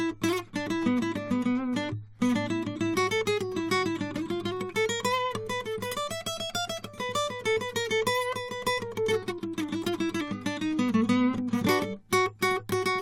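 Listening through this music, nothing stood out as a technical problem at any point.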